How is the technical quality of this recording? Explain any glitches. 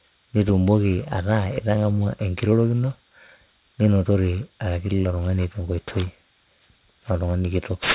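The recording is compromised by aliasing that runs through the whole speech clip. Aliasing is present from start to finish. The audio was brought down to a much lower sample rate with no anti-aliasing filter first, and the band edge sitting at 4 kHz fits a drop from 48 kHz to 8 kHz. Everything above 4 kHz was mirrored back below it as false, unrelated tones, only around 15 dB under the speech itself. Sibilants come out gritty and metallic, and the spectrum stays crowded right up to 4 kHz rather than tapering off.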